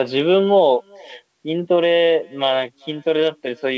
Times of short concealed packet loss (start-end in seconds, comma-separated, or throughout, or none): none